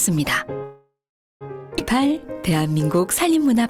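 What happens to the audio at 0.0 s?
Nothing goes wrong at 0.0 s; the audio is intact at that moment.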